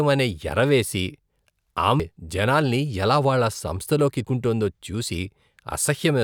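At 2.00 s and again at 4.25 s the speech jumps forward, with roughly a third of a second simply gone and the two sides butted together. That's audio missing between chunks, likely from a recorder dropping material while switching between 2.5 s chunks.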